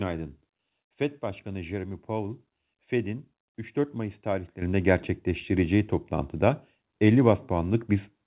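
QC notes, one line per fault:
4.62 s and 7.74 s, microphone volume stepped up: the level jumps in a single step, about 9 dB just before "gerçekleştireceği toplantıda" and then a further about 3 dB at 7.74 s, and stays raised. The call software found the input too quiet and raised the device's input volume. Unlike a talker getting louder or a compressor easing gain up, voice and background noise rise together and instantly, with no ramp, over the band-limited G.711 call sound that stops at 4 kHz.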